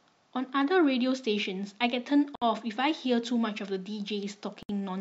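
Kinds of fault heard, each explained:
Gap at a join of encoded pieces: the speech halts for about 63 ms at 2.35 s and 64 ms at 4.63 s, then resumes exactly where it stopped. Unlike a dropout, nothing is lost: encoder delay and end padding insert silence, its edges smeared.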